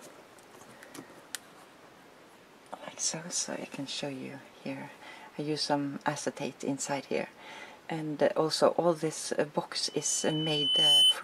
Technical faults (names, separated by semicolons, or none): loudspeaker feedback squeal